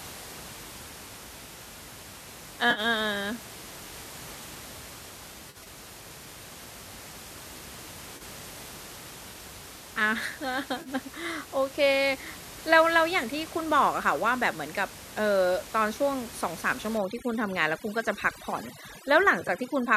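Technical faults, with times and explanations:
2.71–2.80 s, 5.50–5.67 s, 8.17–8.22 s, 10.82–10.89 s and 19.41–19.49 s: AAC frame loss with concealment. Compressed frames failed to arrive, and the decoder rebuilt each gap from the last good spectrum. Each gap sounds like a brief smeared, phasey patch of about 50, 30 and 40 ms at the single dropouts. At 5.50 s, 80 ms of loss is spread over 160 ms in runs of up to around 40 ms. Near 19.41 s, 40 ms of loss is scattered in roughly 10 ms runs. These gaps come in steps of about 10 ms, which points to the short frames of a low-delay AAC codec, likely AAC-ELD.
16.97 s to the end: overdone noise removal. A noise reduction stage clamped down too hard on the room noise, which sits about 17 dB below the speech. Frequency bands near its noise estimate were pushed almost to nothing, taking quiet parts of the speech with them. The background drops and breaks up into twinkling specks through the final three seconds.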